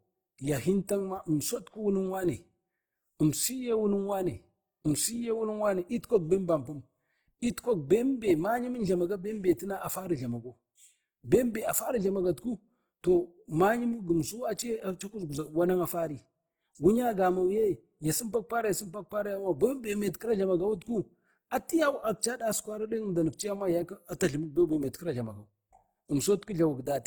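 From start to finish the speech sounds rough and grainy, with hissy highs. This is likely Opus compression in its CELT music mode, at a rate that fits about 16 kbps. A spectrogram shows content reaching about 20.1 kHz, but with blotchy, noise-filled upper bands.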